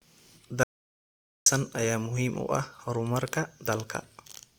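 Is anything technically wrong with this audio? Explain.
Yes. From 0.63 to 1.46 s there is an audio dropout to silence: the input was likely lost, through a disconnected device, failed link or mute, while recording continued writing silence. The speech cuts off mid-flow, leaving about 0.83 s of total silence with no room tone, and what was said there is gone.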